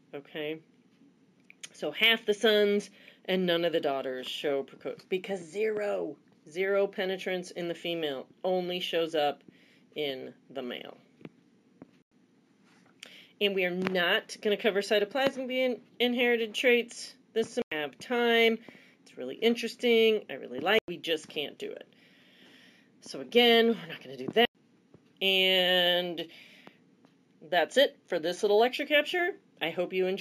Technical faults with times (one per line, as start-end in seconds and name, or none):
0.00-30.21 imaging from linear upsampling